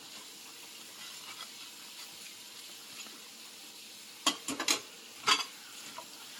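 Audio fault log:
Throughout: generation loss. The sound is swirly, smeared and hollow, with blurred attacks and nothing above 19.1 kHz. This is more damage than a single lossy encode at the apparent quality would cause, which fits an AAC-LC chain near 96 kbit/s repeated around five times. The likely cause is repeated decoding and re-encoding. Each pass quantised again on a shifted frame grid, so noise accumulated instead of staying fixed.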